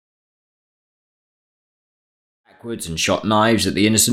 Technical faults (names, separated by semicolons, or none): none